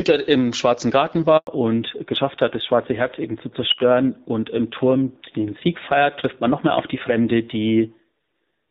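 A handover gap runs from 1.37 to 1.47 s. As the call switched networks, no speech frames arrived for 100 ms, so the sound falls away almost instantly and leaves a clean hole of silence until the new link picks up.

A fallback to narrowband follows at 1.47 s and lasts to the end. The light, clear wideband coding before it, which fits AMR-WB around 12.65 kbit/s, gives way to a low-rate narrowband codec, likely AMR-NB near 7.4 kbit/s. Nothing survives above 4 kHz, so the speech turns muffled and grainier.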